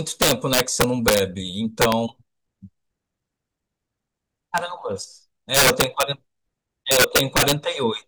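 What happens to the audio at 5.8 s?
Integer overflow hits the speech from about 5.55 s to 6.03 s, so 5.8 s falls right inside it. With the signal driven about 6 dB past the top of the integer range, each peak that crosses the limit wraps round to the opposite extreme instead of being held there. The result is violent cracks on the loud parts, far sharper and harsher than clipping, which would only flatten those peaks into a buzzy distortion.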